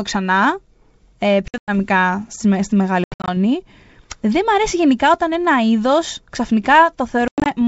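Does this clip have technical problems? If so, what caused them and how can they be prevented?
Yes: packet loss on an ADPCM call, three times. It hits at 1.48–1.70 s, right before "στη στη μεγάλη", then at 3.04–3.36 s just after "στη στη μεγάλη", and again at 7.28–7.49 s. Each is a scatter of hard silent holes, up to 100 ms at a stretch. Since this G.722 link is ADPCM, the decoder's predictor and step size drift from the sender's, so the audio comes back slightly distorted before settling. A jitter buffer plus proper packet-loss concealment, or FEC on the link, would prevent it.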